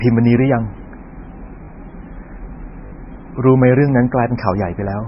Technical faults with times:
0.00-5.08 MP3 compression
1.64-1.68 repeated buffer
2.86-2.92 repeated buffer

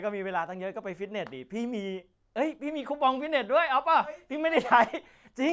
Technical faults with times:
none

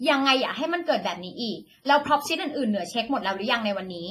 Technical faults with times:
0.00-4.10 WMA compression

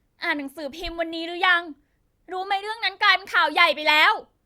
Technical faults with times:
none

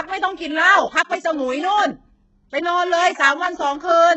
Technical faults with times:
0.00-4.17 HE-AAC compression

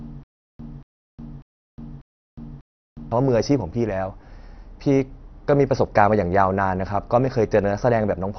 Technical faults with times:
0.00-8.38 MP2 compression
0.00-3.12 stutter with silent gaps

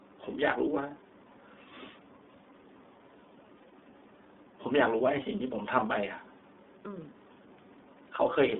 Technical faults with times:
0.00-8.59 iLBC codec
3.68-3.73 lost iLBC frames

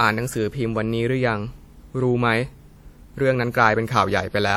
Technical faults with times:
0.00-4.56 transcoding between lossy codecs

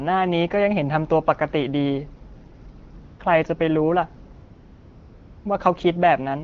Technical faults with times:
3.05-3.19 AMR comfort noise
4.33-5.45 AMR comfort noise

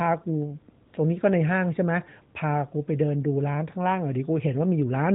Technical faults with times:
0.88-0.94 AMR comfort noise

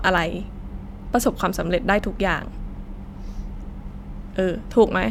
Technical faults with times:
none

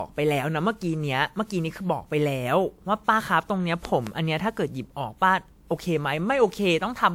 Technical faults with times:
0.00-7.14 generation loss
3.85-4.09 loud pop

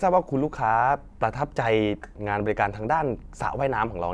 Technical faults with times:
none

